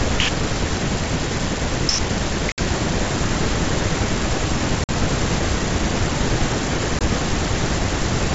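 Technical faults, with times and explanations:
2.52–2.59 s, 4.84–4.89 s and 6.99–7.01 s: packet loss on an ADPCM call. Holes of about 60, 50 and 20 ms open in the G.722 wideband speech, shown as flat silent gaps in the waveform and blank vertical bands in the spectrogram. When audio resumes, the receiving decoder's predictor and step size no longer match the sender's, so the speech returns slightly distorted and settles within tens of milliseconds.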